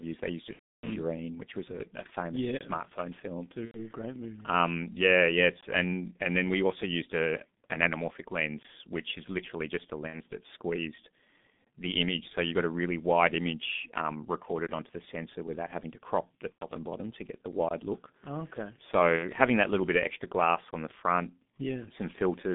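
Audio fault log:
throughout G.723.1 codec: a low-rate telephony coder at about 6.3 kbit/s working in 30 ms frames, with the line limited to roughly 150 Hz to 3.6 kHz and heavy coding damage. The speech comes across muffled and hoarse, with smeared consonants and a slowly tracking, coarse voice quality.
0.53–0.89 s, 3.66–3.79 s, 10.07–10.20 s, 16.52–16.65 s, 19.17–19.28 s VoIP packet loss concealed by the speech codec: packets dropped, longest gap about 300 ms at the start, others 60 to 90 ms. The decoder repeats its last pitch and filter at falling gain, so speech stretches into a fading buzzy tone or coloured noise and stays weak briefly afterwards.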